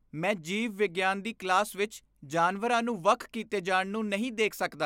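Listening to the speech in this recording, nothing stood out as a technical problem at any point.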